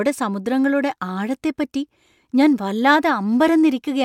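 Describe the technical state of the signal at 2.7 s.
At 2.7 s the speech signal is intact, with no audible fault at that moment.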